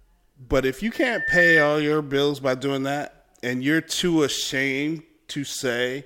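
A microphone is picking up the loudspeaker it drives, and at 1.8 kHz the gain around that loop rises above unity, so the speech recording carries loudspeaker feedback squeal from 0.92 to 1.77 s: a single piercing tone that swells over roughly half a second to about 10 dB above the speech.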